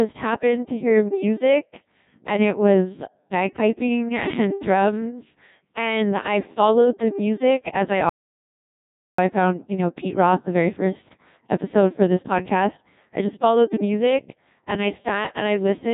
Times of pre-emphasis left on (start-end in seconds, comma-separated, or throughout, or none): none